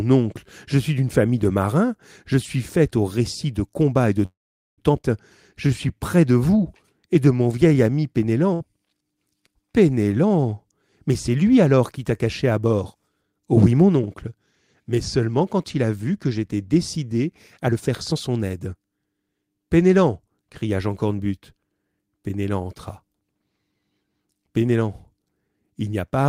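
At 4.25 s the packets were likely held up in transit, so the jitter buffer ran dry and a call audio freeze sets in: the last sound is carried on briefly, then about 0.44 s of silence follows. At 4.80 s the speech picks up exactly where it stopped, so nothing is lost, but roughly half a second has been added.

From 5.02 to 5.05 s there is a skip ahead. With later audio already queued, a stretch was dropped. Only a 16 ms fill bridges the jump, so around a third of a second of speech vanishes and the two sides are joined almost directly.

From 5.54 to 8.00 s the jitter buffer slow-down is rebuilding its reserve by repeating single pitch periods and bits of pauses. Playback runs at 89% speed with the pitch unchanged, adding 284 ms. Sounds are drawn out.

At 8.54–8.62 s a burst of packet loss removes 60 ms of audio. The receiver covers the gap with 64 ms made from the last sound, which fades as a held buzz or hiss before the speech resumes further on.

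A jitter buffer speed-up runs from 10.16 to 13.03 s at 107% speed and trims roughly 0.2 s. A second, stronger one runs from 17.61 to 19.21 s at 120% and cuts roughly 0.3 s. In both, short pitch-period pieces are removed to reduce the backlog, so the speech sounds hurried at its normal pitch.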